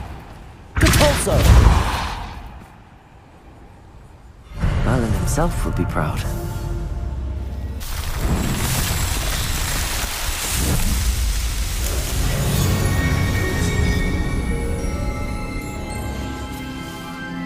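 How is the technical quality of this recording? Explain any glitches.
No glitches to explain: nothing in the recording stands out as a technical fault.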